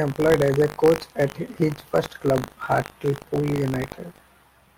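Throughout the speech there is buffer tearing: the writer and reader of the audio ring buffer have drifted so they cross within every period. A small sliver of each buffer, roughly 3 percent, replays audio from about 70 ms earlier, joined hard at both edges. That produces a rattling, robotic buzz at 50 Hz, which fits a 20 ms buffer period. Unlike mains hum at the same frequency, it vanishes in the pauses and rides only on the speech.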